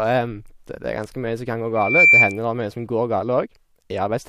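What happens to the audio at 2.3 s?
At 2.3 s you're in the middle of a loudspeaker feedback squeal running from about 1.75 to 2.39 s. The mic is picking up its own speaker, so a 2.3 kHz tone swells over roughly a third of a second and howls well above the speech.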